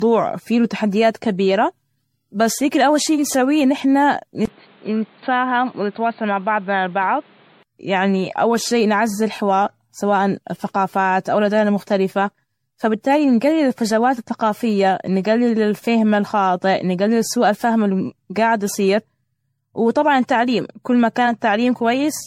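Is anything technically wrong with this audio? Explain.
Yes. Throughout the speech there's generation loss, likely from around ten passes through MP3 at 64 kbit/s. Each re-encode quantises again on a shifted frame grid, so the errors pile up. It sounds swirly and hollow, with blurred attacks and nothing above 16.5 kHz.

From 4.45 to 7.65 s, after "شي نسويه إن نحن" and up to "يعني اول شي نعزز", the input switches to a poorer device, likely another microphone or a headset's call profile. There's a 20 ms gap at the switch. Then the band stops at 4.5 kHz, so the sound goes dull and boxy. The level stays about the same, with new background noise roughly 30 dB down.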